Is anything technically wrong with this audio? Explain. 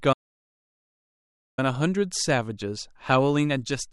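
Yes. There is an audio dropout to silence from 0.13 s to 1.58 s. The speech cuts out almost at once and comes back about 1.4 seconds later, partway through. The gap is silent, with no room tone or hiss beneath it. That points to the input being lost for a moment, likely through a disconnected device, a failed link or a stray mute, while the recorder kept writing silence. Whatever was spoken in that stretch is gone.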